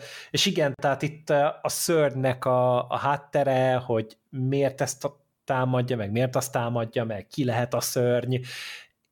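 At 0.74 s, between "és igen" and "tehát itt a szörnynek", a gap at a join of encoded pieces cuts the speech for about 45 ms. Untrimmed encoder delay and end padding leave a silence with smeared edges.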